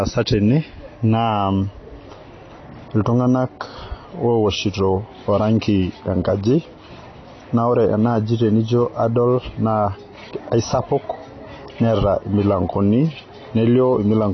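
From start to finish the speech sounds dull and smeared, with nothing above 6 kHz, and the sibilants come out fizzy and warbling instead of crisp. That's classic AAC compression damage, and it's plainly audible here. The likely cause is an AAC-LC encode at a low bitrate, the kind of result you'd expect around 24 kbps, where the encoder drops the cut-off and starves or noise-fills the upper bands to save bits.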